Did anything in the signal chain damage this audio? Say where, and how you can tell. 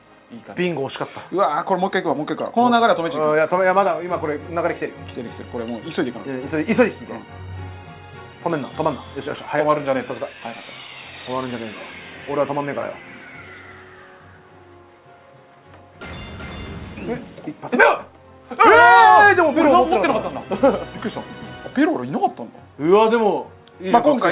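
No, nothing along the way damaged it; the audio came over a call path using G.711 A-law at 64 kbps, so the lack of anything above 4 kHz is simply how that codec is built to sound.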